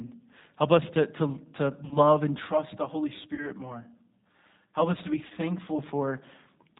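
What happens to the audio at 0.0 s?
From 0.0 s onward, G.729 coding rebuilds speech from a filter and sparse pulses, sounding rough and synthetic. A spectrogram shows nothing above 4 kHz.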